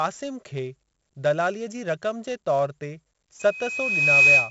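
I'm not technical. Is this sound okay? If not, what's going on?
No. Two problems can be heard.

The whole recording has 4-bit ADPCM compression, an old, very economical way of storing sound. Each sample is saved as a small step from a guess based on the previous ones, and only a few step sizes are available, so every louder moment of the speech carries a gritty hiss, and sudden sounds come out rough. The damage here is heavy, and nothing above about 7.7 kHz survives, so the speech also sounds dull and muffled.

From 3.39 s to the end, there is a loudspeaker feedback squeal. A microphone was picking up the loudspeaker it was feeding, and one pitch, around 2.5 kHz, kept going round that loop and growing. It swells over roughly the first 0.7 s into a steady piercing whistle that ends up well above the speech.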